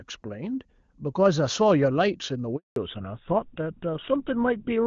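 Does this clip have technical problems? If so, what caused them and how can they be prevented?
Yes. There's a handover gap at 2.56 s: the sound drops out within a few tens of milliseconds and stays silent for 200 ms while the call jumps networks. Keeping the phone on a stable network or using seamless handover would prevent it.

Right after, at 2.76 s, there's a fallback to narrowband. Everything above 4 kHz disappears through to the end, so it turns duller and rougher, likely a switch from HD Voice to an old codec like GSM full rate. Staying on a network that supports HD Voice end to end avoids it. Before the switch, the wideband HD Voice sounds clean, consistent with a high AMR-WB rate.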